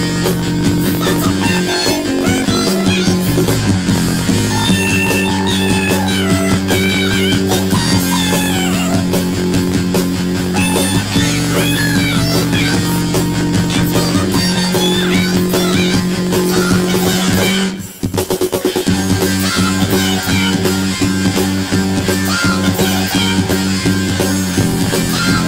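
The whole clip is hit by planar audio read as interleaved. Each chunk of roughly 21.33 ms, which fits a 1024-sample block, was stored as all-left-then-all-right but read back as alternating pairs, so each half plays at double speed, left and then right. The result sits a full octave up (12 semitones) while the overall pace stays normal, with a flutter at about 46.9 Hz, the rate the blocks cycle.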